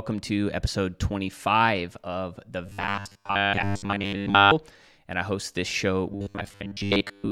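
From 2.66 to 4.51 s, and again from 6.12 s to the end, the speech turns into a rigid, metallic buzz at 100 Hz. This is robotic sound from repeated short buffers, likely from a 10 ms chunk looping while most of the real audio is skipped.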